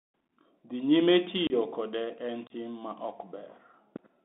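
Across the whole clip the speech runs through a Bluetooth CVSD headset codec, the narrowband link that sends one bit per sample to say whether the waveform steps up or down, with a step size that adapts as it goes. The line band runs from about 150 Hz to 3.6 kHz, so the sound is thin and boxy. The codec damage is plainly audible: a granular hiss sits under the speech, sibilants come out scratchy, and loud bright passages distort where the steps can't keep up. The character fits a 64 kbps CVSD stream.

At 1.47 s, just before "kode en", there is unconcealed Bluetooth headset packet loss. Audio packets between headset and phone went missing and nothing was patched in, leaving about 30 ms of gap inside a 1.47 to 1.53 s window. That amount fits several packets of a few milliseconds each. The hole has hard edges, so the speech chops abruptly and can click.

The same fault recurs at 2.47 to 2.53 s, between "kode en" and "ma ok", with another 30 ms dropout and the same abrupt, chopped break.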